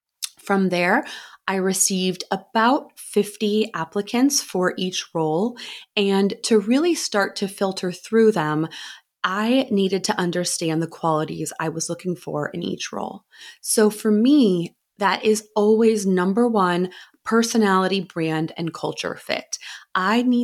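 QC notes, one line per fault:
No faults found on listening.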